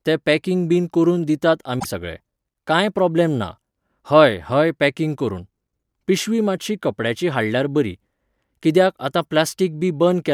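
A speech clip with a brief glitch: at 1.79 s, right after "packing बीन करून दितात", the sound jumps forward and a brief disruption lasts until 1.85 s, after which the speech resumes with "सगळे कांय". This points to a broken MP3 bit reservoir, likely caused by frames being cut out of the stream. The frames after the gap reached back for borrowed data and decoded unrelated bytes instead, producing the roughly 60 ms disruption, consistent with about 24 ms frames.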